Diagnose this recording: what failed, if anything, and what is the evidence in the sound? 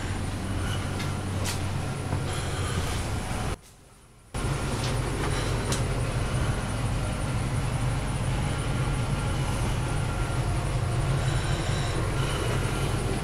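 One channel inverted, from 3.54 to 4.34 s: for that 0.8 s the sound drops by about 24 dB to a faint residue, then returns at full level. The likely cause is a polarity flip on one side of the stereo pair, probably in the analogue wiring, so that when the channels are summed to mono their shared centre content and low end cancel, leaving only the small difference between left and right.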